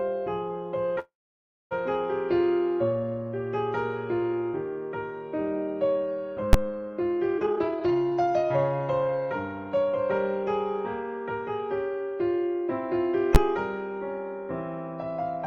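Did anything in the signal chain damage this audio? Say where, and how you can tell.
Yes. Call audio freeze from 0.99 to 1.73 s: likely a network stall emptied the jitter buffer. The sound trails into a fading buzz, mostly silence, then resumes intact.

Invalid numbers at full scale at 6.53 s and 13.35 s: a processing block of about 12 ms, which fits a 512-sample buffer, hit full scale, producing a single loud bang.

Jitter buffer speed-up from 7.38 to 9.09 s: the receiver cut short pitch-period pieces, about 0.7 s in total, so the sound runs at 142% speed at unchanged pitch.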